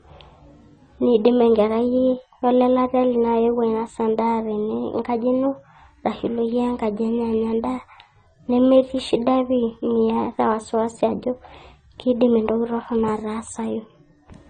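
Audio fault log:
throughout, transcoding between lossy codecs: the speech has nothing above 9 kHz, seen as a flat, hard ceiling on a spectrogram. Two different flavours of coding grit sit on top of each other, which points to a likely Opus encode re-encoded at low-rate AAC-LC.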